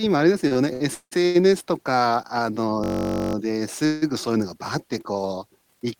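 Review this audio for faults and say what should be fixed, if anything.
From 0.47 to 1.37 s the speech has repeated stalls, a stutter. The jitter buffer ran dry five times as packets arrived late, and the receiver stretched the last sound to cover 390 ms in total, the longest gap 171 ms. Nothing is missing, but it drags. A larger adaptive jitter buffer would absorb the uneven arrival.

Between 2.84 and 3.35 s there's a system hang loop. A 21.33 ms slice repeats 24 times, giving a steady buzz at about 46.9 Hz, which fits a 1024-sample ring buffer cycling while the driver froze. Essentially no audio is lost. Audio threads at real-time priority with a watchdog that mutes on stall would prevent this.

At 3.85 to 4.04 s there's a call audio freeze. The sound is continued for 163 ms before it resumes where it left off, with no silence and nothing missing. The likely cause is packets held up in transit that emptied the jitter buffer. 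Adaptive playout with better network QoS would keep this from recurring.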